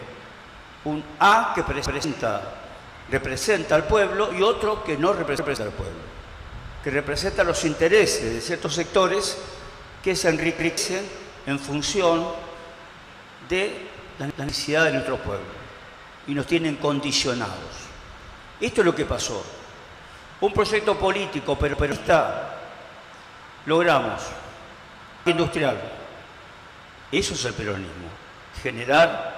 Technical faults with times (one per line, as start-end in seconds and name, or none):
1.86-2.04 repeated buffer
5.39-5.57 repeated buffer
10.59-10.77 repeated buffer
14.30-14.49 repeated buffer
18.20-18.39 repeated buffer
21.73-21.92 repeated buffer
25.08-25.26 repeated buffer